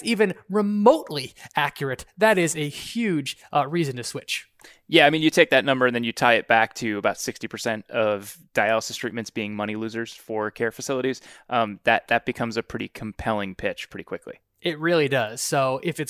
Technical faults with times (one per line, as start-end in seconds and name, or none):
none